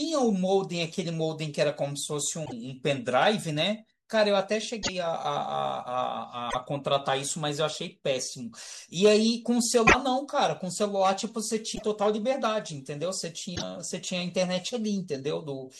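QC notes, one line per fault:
2.44–2.53, 4.82–4.89, 6.49–6.55, 9.86–9.95, 11.74–11.83, 13.55–13.63 s: broken MP3 bit reservoir. A glitch lasting two to three 26.1 ms frames, heard as a chirp, noise burst or short hole, likely from dropped frames, where the following frames decoded borrowed bytes from the wrong frame. On a spectrogram each appears as a brief disruption of the speech harmonics, with a waveform discontinuity where the sound jumps ahead.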